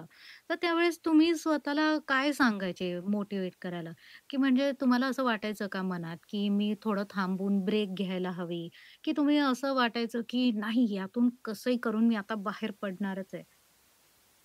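No technical faults can be heard anywhere in the clip.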